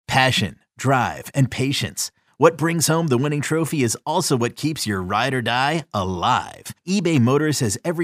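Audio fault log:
No faults are heard anywhere in this speech.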